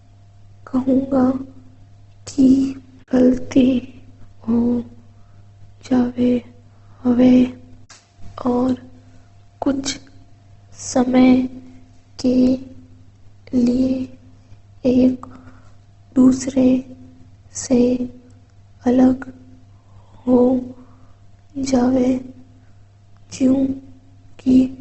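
From start to end, the speech carries Opus compression damage, likely from a low bitrate around 16 kbps. Nothing reaches above 8.1 kHz, so the top end is cut away. The encoder has too few bits to code the finer detail. It keeps each band's overall energy but fills the gaps with folded copies of lower bands or with noise. The damage is plainly audible. The voice sounds rough, grainy and noisy rather than clean.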